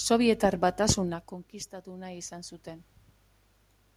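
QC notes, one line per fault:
1.83–2.94 s, automatic gain rising: the input fell by about 16 dB as the talker moved away near 1.0 s, so the gain control raised its gain about 5 dB over 1.1 s, and voice and room noise swell up together.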